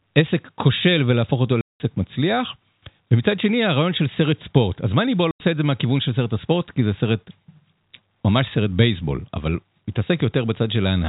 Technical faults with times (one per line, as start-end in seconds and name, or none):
1.61-1.80 packet loss filled with silence
5.31-5.40 packet loss filled with silence